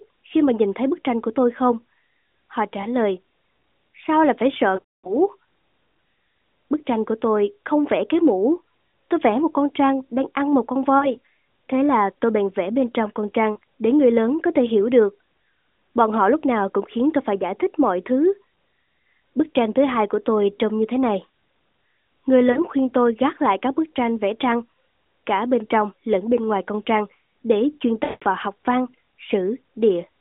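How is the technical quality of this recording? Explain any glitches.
The recording is narrowband mobile-call speech, confined to roughly 250 Hz to 3.6 kHz, with light AMR codec colouring. Lost AMR speech frames interrupt it six times.

A single dropout at 2.82 s sounds like a brief dip, which fits one 20 ms frame. The longest run is 4.76 to 5.17 s. The sound smears, drags, then fades toward silence. Short warbles come at 10.98 to 11.15 s after "đang ăn một con", and at 13.52 to 13.57 s between "vẽ bên trong con" and "để người lớn có". Another falls at 22.52 to 22.60 s just before "khuyên tôi gác lại". A second long fade runs from 28.04 to 28.24 s. In each case, corrupted frames were discarded. The decoder repeated the last good pitch and vocal-tract settings with shrinking gain. Speech then returns briefly weak or rough.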